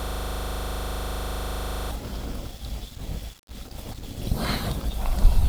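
From the very first moment until about 1.91 s, the speech is caught in a system hang loop that's already running when the clip opens. A 40 ms slice of audio repeats exactly, about 47 times. It sounds like the machine or driver froze while the sound hardware kept replaying the same ring buffer. At a 25 Hz loop rate that lands between a coarse buzz and a rapid stutter, and it suggests a buffer around 40 ms long.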